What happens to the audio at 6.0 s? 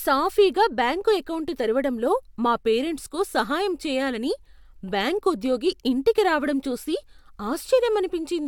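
Nothing goes wrong at 6.0 s; the speech carries on intact there, with no dropout, click, distortion or other fault.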